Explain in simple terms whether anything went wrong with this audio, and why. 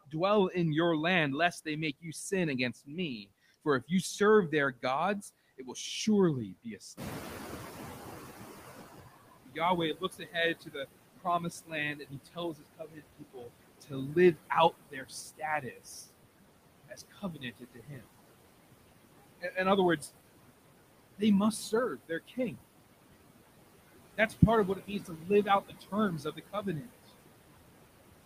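Noise suppressor artifacts run through the whole recording. The cleanup filter keeps pushing down whatever it judges to be steady background hiss, so the remaining noise dips between words and swells under them, and the leftovers can flutter or sound watery.

Speech cut by the noise suppressor happens at 0.05–0.54 s, 1.65–7.01 s, 9.45–18.06 s, 19.4–20.09 s, 21.18–22.61 s and 24.17–26.89 s. The filter mistakes quiet parts of the speech for noise and turns them down, so soft sounds and word endings go faint. The stretch from 9.45 to 18.06 s is hit hardest, losing several seconds in total.

Noise suppressor catching up happens from 6.97 to 9.11 s. The room's background noise jumps louder at about 7 s, and the filter takes roughly 2.1 s to adjust. During that time the noise comes through more strongly, then gradually fades back down.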